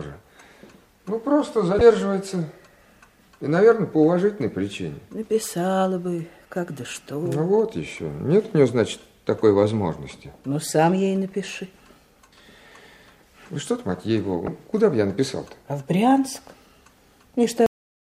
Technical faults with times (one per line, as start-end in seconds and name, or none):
1.78-1.81 damaged data in a compressed stream
14.45-14.48 damaged data in a compressed stream
17.66-18.19 cut-off end